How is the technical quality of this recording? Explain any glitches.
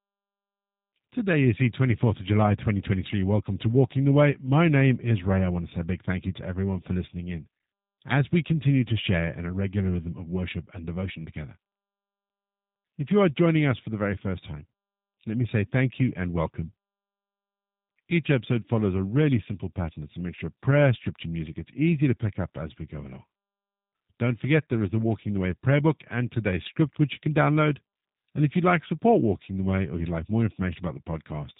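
The quality is limited by one fault that runs through the whole recording. G.729 codec throughout: the speech was rebuilt from a vocal tract model and sparse pulses, consistent with 8 kbit/s, so everything above 4 kHz is gone and it sounds plainly rough and synthetic.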